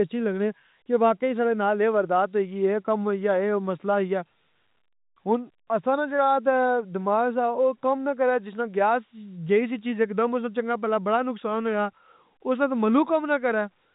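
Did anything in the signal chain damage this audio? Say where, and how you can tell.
No, nothing stood out on listening to this speech: the sound sits within the narrow telephone band of G.711 coding, with nothing above about 3.8 kHz.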